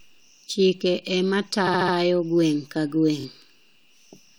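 Speech with repeated frames: at 1.66–1.94 s a 70 ms block stutters four extra times, and at 3.19–3.24 s a 23 ms block twice, lengthening the audio.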